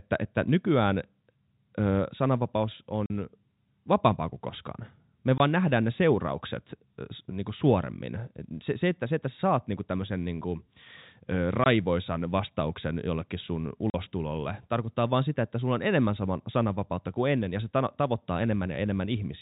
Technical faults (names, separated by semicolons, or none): packet loss filled with silence